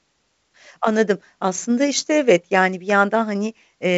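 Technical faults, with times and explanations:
No technical faults can be heard in this speech. The G.722 wideband telephone coding at 64 kbit/s carries the speech with little or no audible codec damage, and nothing reaches above about 7.7 kHz.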